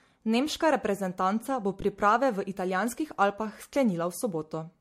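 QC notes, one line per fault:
throughout — generation loss: a swirly, smeared, hollow MP3 character with blurred attacks and nothing above 16.3 kHz. Likely cause is repeated decoding and re-encoding, about four passes consistent with 64 kbit/s. Each pass requantises on a shifted frame grid, stacking noise and spectral holes.
1.81 s — underrun with held sample: the waveform freezes flat for 15 ms at its last value, so the sound stops with little or no click. No audio was lost, and playback resumes where it paused, so the restart is soft.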